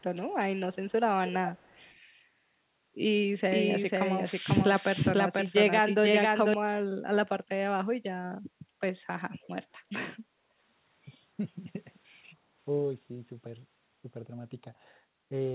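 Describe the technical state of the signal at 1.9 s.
At 1.9 s the signal carries an echo leak (1.26 to 1.92 s): a faint copy of the speech trailing 268 ms behind, roughly 15 dB down, likely far-end loudspeaker pickup that an echo canceller missed. Spectrograms show faint, right-shifted duplicate harmonics, and the waveform shows low-level tails after syllables.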